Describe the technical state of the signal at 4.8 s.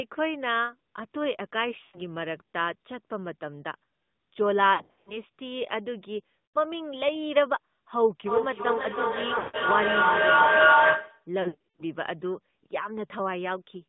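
At 4.8 s the signal sits inside a burst of lost AMR speech frames, running from 4.74 to 5.18 s. Radio errors corrupted a string of frames, so the decoder had nothing valid to play. It filled each gap by repeating the last good pitch and vocal-tract settings at falling gain. The damage is scattered across the span, with the longest unbroken gap about 80 ms. The sound dips and warbles, smears briefly, then returns rough.

The whole passage also carries the AMR narrowband mobile codec. The line is limited to roughly 150 Hz to 3.7 kHz, so the top end is gone. The codec models the vocal tract and drives it with sparse pulses. At this level the result is plainly buzzy and synthetic, which fits a mode near 10 kbps. Around 4.8 s that coarse texture frames the dropout warble.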